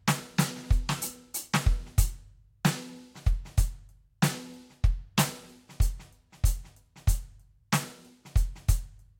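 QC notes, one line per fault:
No faults heard in this music.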